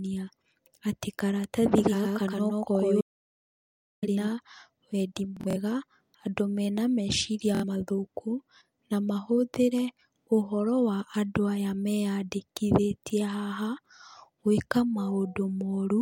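Doubled audio track, 1.78 to 4.28 s, just after "atĩ karatathi": a second full-band copy of the speech trails the first by roughly a tenth of a second at about the same level. It has no room colour and starts and stops abruptly, likely from a slower duplicate capture path or a misaligned edit.

Audio dropout to silence, 3.01 to 4.03 s: inside that doubled stretch the sound cuts out completely for about 1 s, with no room tone at all. This is likely a lost input, with silence written in its place, and the speech from that second is gone.

Bluetooth stutter, 5.37 to 5.56 s and 7.55 to 7.64 s: late or missing packets made the receiver replay its last buffer. In the first event about 116 ms is lost across 186 ms, with the longest run 46 ms, which fits roughly five dropped packets and sounds like a brief machine-gun stutter. The second event loses about 70 ms. After each event the speech resumes further on, as if it had kept playing.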